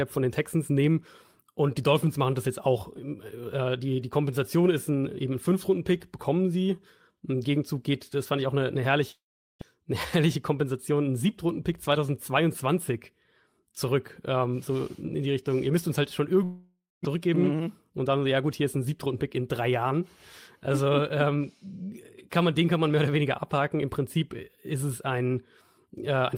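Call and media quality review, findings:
Long network dropout, 9.11–9.63 s after "ich auch eine eine" and 16.44–17.07 s after "müsst uns halt schon". Concealment buzz fades to silence, and about 0.4 s of speech is skipped rather than delayed. Likely packet loss at the receiver.

Jitter buffer speed-up, 9.93–10.91 s and 17.14–19.71 s. Speech runs about 7% fast and sounds hurried at unchanged pitch, unlike resampling. Pitch-period trims drain roughly 70 ms and 200 ms of built-up delay.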